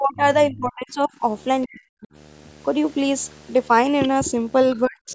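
Video or display buzz runs through the whole recording, about 30 dB below the speech. A screen or video cable coupled into the audio path, leaving a steady 75 Hz buzz with hash above it, tied to a 75 Hz picture field rate.

Speech suppressed in double talk starts right at 0.0 s and lasts to 0.24 s, then returns from 0.50 to 1.24 s and from 1.65 to 2.08 s. The talker's voice dips sharply, sinking deepest in the 1.65 s stretch. The likely cause is an echo canceller that could not separate the talker from loudspeaker echo while both sides spoke, so it turned everything down.

Other side's voice leaking through appears from 0.20 to 0.46 s, overlapping the first dip, and again from 4.71 to 4.79 s. A second voice sits well beneath the talker, fainter in the later scrap. This is likely loudspeaker sound the echo canceller failed to remove from the microphone.

The double-talk suppression returns from 4.86 s to the end at 5.15 s, pulling the voice down steeply once more. 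Above all of this, the call's microphone processing leaves nothing above 8 kHz, which is normal band-limiting.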